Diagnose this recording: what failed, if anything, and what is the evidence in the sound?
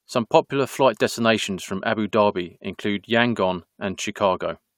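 Nothing in this speech recording points to a failure at any stage of the chain, so there's no fault to diagnose here.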